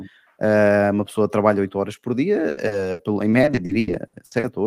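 Right after "horas por", from 2.49 to 4.45 s, repeated packet loss keeps patching holes up to 80 ms by stretching prior sound, turning the speech choppy with pieces missing.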